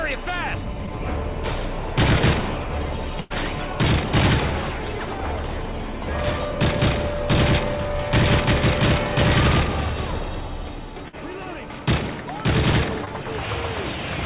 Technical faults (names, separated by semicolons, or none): short concealed packet loss; burst of packet loss